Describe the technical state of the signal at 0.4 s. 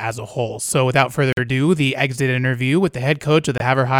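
At 0.4 s the speech signal is intact, with no dropout, distortion, glitch or other audible fault at that moment.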